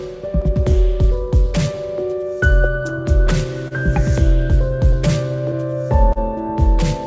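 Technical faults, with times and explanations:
Throughout: clock drift between sender and receiver. The sending clock runs about 2% slow against the receiver. The jitter buffer keeps draining, so the receiver must stretch the audio to keep playing. This gives small, unevenly spaced timing hiccups across the whole clip.
0.15 to 5.08 s: repeated timing corrections. The receiver slows playback to 99% speed, repeating tiny pieces to make up for the slow sender. Together they add roughly 40 ms. Each edit is slight.
3.68 to 3.74 s and 6.13 to 6.19 s: short stall from a late packet. Each time a packet came late and the buffer ran empty. The receiver held the last sound for 30 ms until the packet arrived. Nothing is lost, but delay grows by 30 ms, and a sound is held too long. This all passes through a G.722 call path, with nothing above 8 kHz.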